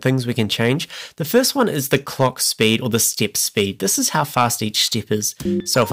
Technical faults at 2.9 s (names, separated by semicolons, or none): hard clipping